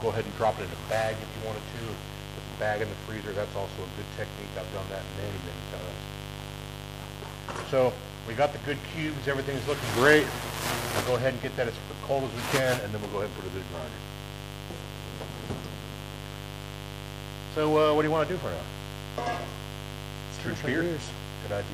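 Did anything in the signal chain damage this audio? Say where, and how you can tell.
Yes. Mains buzz enters in the analogue wiring. A raspy 50 Hz buzz runs throughout, only about 10 dB below the signal. Switching spikes from a dimmer, rectifier or missing shield spread harmonics upward.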